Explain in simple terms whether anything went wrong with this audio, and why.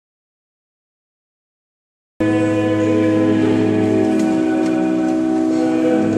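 Yes, something went wrong at the start. The clip opens in an audio dropout to silence. From 0 to about 2.2 seconds there is dead silence, with no background hiss at all. The input was likely lost, so only silence was recorded. Whatever happened then is missing.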